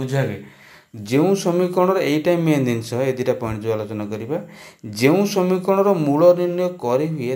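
Throughout, crude rate conversion by repeated samples, which fits a 32 kHz to 48 kHz step, leaves inharmonic fizz roughly 30 dB down that tracks loud, bright sound, unlike steady hiss.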